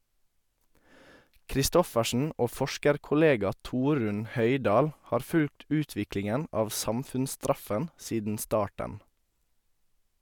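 A short speech recording with no technical faults to report. Nothing in the signal chain calls for comment at any point in the recording.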